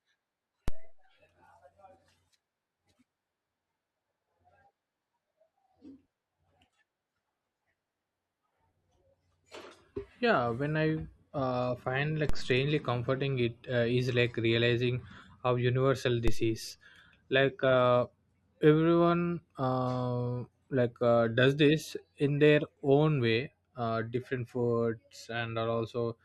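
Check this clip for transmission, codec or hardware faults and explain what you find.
There is one fault type here: a DC step, occurring three times, at 0.68 s, 12.29 s and 16.28 s. At each point the waveform's zero line jumps abruptly, by about -19 dBFS at the first two and about -16 dBFS at the third, then drifts back as a 2 Hz high-pass drains the offset. Each step is heard as a low thump under the speech. On a waveform, the trace suddenly shifts off centre and slowly sags back. A spectrogram shows a brief broadband vertical line with energy concentrated at the very bottom.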